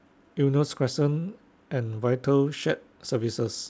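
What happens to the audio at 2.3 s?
Nothing goes wrong at 2.3 s: the speech carries on intact through the G.722 call path, which leaves nothing above 8 kHz as usual.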